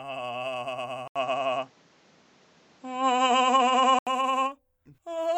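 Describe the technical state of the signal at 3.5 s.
At 3.5 s you're in the middle of what sounds like an input switched to a poorer device, running from 1.08 to 4.07 s. The music goes dull and boxy with nothing above 8 kHz and a few dB of level shift, plus a faint new noise floor, after an 80 ms dropout at the switch. The likely cause is the recorder jumping to a narrower-band mic.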